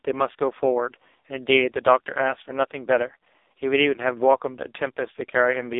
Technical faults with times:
0.00-5.80 AMR narrowband mobile codec

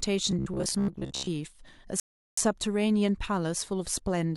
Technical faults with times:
0.31-1.29 robotic sound from repeated short buffers
2.00-2.38 rebuffering stall

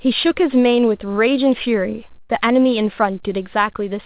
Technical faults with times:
2.20-2.31 burst of packet loss

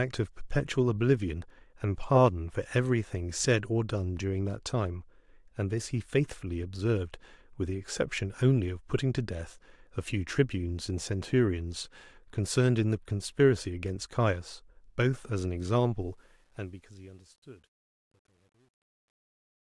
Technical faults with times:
16.00-19.64 truncation distortion on a fade

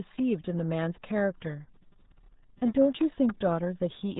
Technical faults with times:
0.00-4.19 RealAudio 14.4 codec

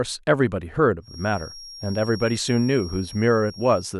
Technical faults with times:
1.00-4.00 feedback whistle

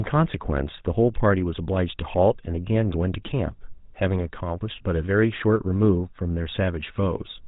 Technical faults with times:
0.00-7.48 GSM full-rate codec

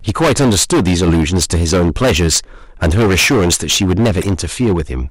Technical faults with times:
0.00-5.10 hard clipping
1.06-1.15 corrupt frame decoded
4.21-4.28 corrupt frame decoded

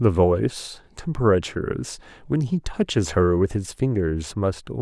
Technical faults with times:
none

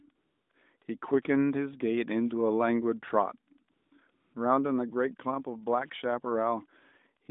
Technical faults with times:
0.16-0.82 AMR comfort noise
3.72-4.34 AMR comfort noise

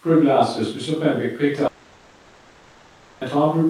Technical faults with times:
1.67-3.23 long network dropout

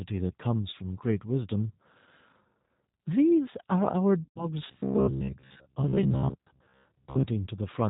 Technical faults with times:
0.00-7.90 G.729 codec
4.24-4.48 VoIP packet loss concealed by the speech codec
4.68-7.26 robotic sound from repeated short buffers

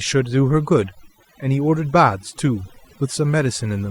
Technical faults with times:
0.00-3.90 overdone noise removal

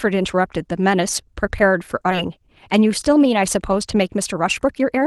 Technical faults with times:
2.11-2.13 skip ahead
2.21-5.06 jitter buffer speed-up

